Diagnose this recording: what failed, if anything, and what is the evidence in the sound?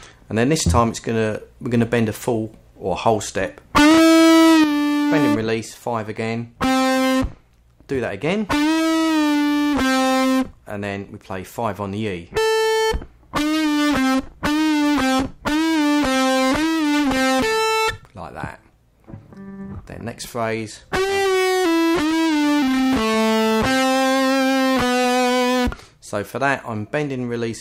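At 4.64 s the level drops abruptly by about 6 dB and stays down to the end, with no recovery. Anything carried only on one side is gone from that point, and what remains is what both channels shared, now at half amplitude in the mono sum. This is one channel dropping out, likely at the analogue wiring stage, such as a failed cable or connector, so the mono fold-down receives only one live input.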